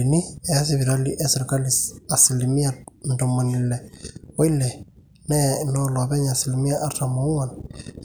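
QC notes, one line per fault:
No faults found in the speech. Nothing calls for a timed entry.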